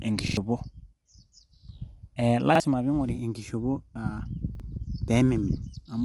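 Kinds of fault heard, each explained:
Low-delay AAC compression: The speech was likely squeezed through the low-delay AAC used in calls, whose short frames resolve pitch harmonics poorly. At what sounds like about 32 kbps, the speech turns rough and grainy throughout, with nothing above 11.6 kHz.
Repeated buffer: Fresh audio missed its deadline, so the device replayed its last block of about 46 ms, which fits a 2048-sample buffer. Hard-joined stutters result: a double repeat at 0.28 to 0.37 s losing around a tenth of a second, and single repeats at 2.55 s and 4.55 s, just after "enkishopo aa".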